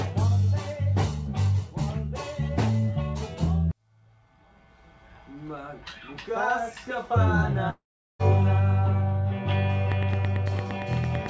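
This audio came through a call path that stops dead at 8 kHz, which fits G.722 at 64 kbps, and it has two problems. The first is a long network dropout from 7.70 to 8.21 s. About half a second likely never arrives, so the receiver stretches the last sound into a fading buzz that gives way to silence for roughly 0.39 s before the audio resumes, with that chunk simply gone. The second is a train of clicks from 9.92 s to the end: regular ticks at about 8.9 per second, peaking around 15 dB above the sound and audible right through it, most likely interference from nearby gear or a faulty connection or power supply.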